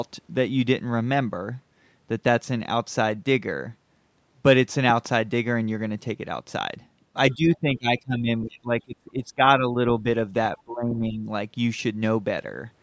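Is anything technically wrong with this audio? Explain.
Yes. There are three kinds of fault.

Loud pop: Between 4.90 and 5.08 s, two sharp pops sit about 10 dB above the speech. They are likely an electrical pulse from a switch, plug or static.

Other side's voice leaking through: At 7.31 to 7.35 s and 10.57 to 10.63 s, faint scraps of a second voice appear well below the speech. They are likely loudspeaker echo that the canceller missed.

Speech suppressed in double talk: From 7.34 to 9.43 s the speech dips by up to roughly 25 dB. It dips slightly at 9.59 to 9.83 s, and by around 20 dB from 10.57 to 11.27 s. This is likely the echo canceller attenuating the talker while both sides spoke at once.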